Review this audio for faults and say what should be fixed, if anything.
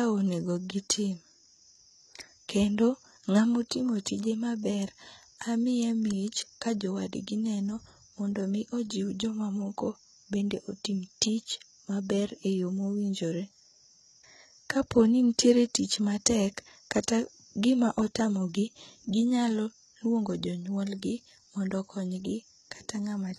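Throughout the speech, s sounds are gritty and lispy, and the treble sounds bright but synthetic, with nothing above 11.8 kHz. The likely cause is heavy HE-AAC compression, which rebuilds the upper band by copying lower bands upward, consistent with roughly 16 kbps. Encode at a higher bitrate, or use a full-band codec, to prevent it.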